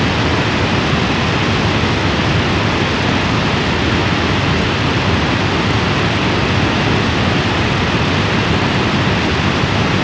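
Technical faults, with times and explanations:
No technical faults can be heard in this clip.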